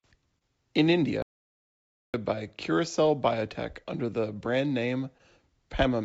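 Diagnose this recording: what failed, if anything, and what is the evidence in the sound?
The speech has a faintly unsteady tempo from start to finish. This is clock drift between sender and receiver: the sender's clock runs about 3% slow, so the receiver's jitter buffer keeps draining. The fault sits in the network and buffer stage, beneath the G.722 call path's band limit at 8 kHz.

Repeated timing corrections run from 0.14 s to 5.90 s, heard as slight hiccups and a drag to about 99% speed. The buffer, running short, repeats small slices of audio to stay in step, adding roughly 70 ms in total at uneven spacing.

Scattered short gaps appear between 0.38 s and 3.87 s, about seven brief ticks or smears, the longest around 30 ms. Packets arrived late or went missing, and the receiver filled each hole by extending the preceding sound, patching roughly 70 ms overall.

At 1.22 s the audio cuts abruptly to total silence with no room tone and resumes at 2.14 s, a dropout to silence of about 0.92 s. 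The likely cause is the input path failing upstream of the encoder, which kept writing silence.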